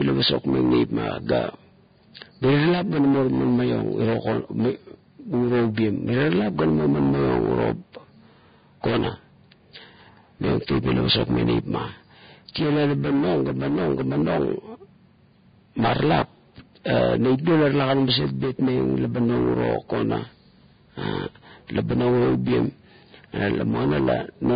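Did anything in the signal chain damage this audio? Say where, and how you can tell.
Yes. The damage happened at the codec stage, and it runs through the whole speech clip. Nothing is left above about 4.9 kHz, so the top end is dull. The remaining treble is hissy and grainy. Consonant attacks are smeared. This is likely Vorbis compression at a very low setting, around 16 kbps. At that rate the encoder lowers its cut-off and quantises the residue so coarsely that fine detail turns into noise.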